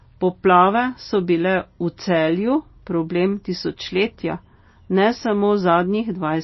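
Throughout the speech, nothing is heard above 5.8 kHz, and s sounds turn watery and swirl with metallic chirps, which is plainly audible damage, likely from MP3 compression at a low bitrate near 24 kbps. Unlike a simple low-pass filter, this flickers unsteadily.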